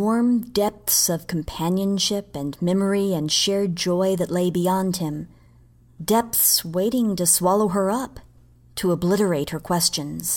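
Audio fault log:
No faults heard anywhere in this speech recording.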